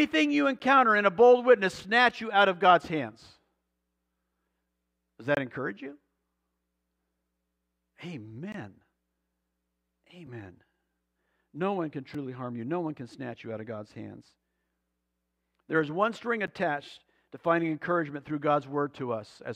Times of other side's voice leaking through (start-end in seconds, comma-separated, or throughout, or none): none